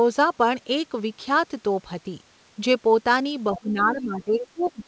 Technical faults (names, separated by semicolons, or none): speech suppressed in double talk; other side's voice leaking through